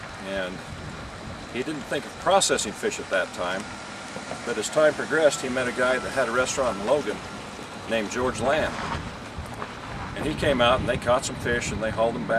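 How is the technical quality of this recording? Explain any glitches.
Nothing in this recording comes across as a glitch; it runs along without any dropouts, clicks or stumbles catching the ear.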